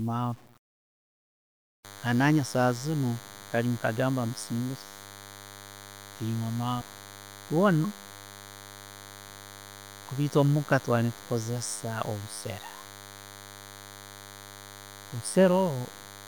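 Speech with low bit depth without dither throughout: grainy, signal-following distortion roughly 30 dB below the level, likely from undithered truncation to 8 bits.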